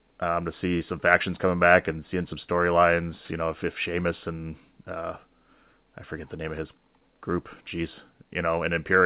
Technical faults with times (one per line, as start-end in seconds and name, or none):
none